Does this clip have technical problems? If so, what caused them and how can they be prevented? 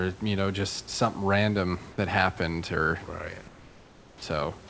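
Yes. From 3.48 to 4.22 s, comfort noise replaces the background for about 740 ms. The real room background gives way to a steady, featureless hiss about 4 dB quieter. The likely cause is discontinuous transmission: the sender stopped sending during the pause, and the receiver synthesised filler noise. Disabling discontinuous transmission, or sending the real background at low bitrate, prevents it.

At 4.20 to 4.22 s, the sound's onset is clipped by the voice detector. About 20 ms of the beginning is missing, so the sound starts abruptly. The detector was likely slow to notice the restart, and comfort noise filled the gap. A detector with look-ahead or a faster attack prevents it.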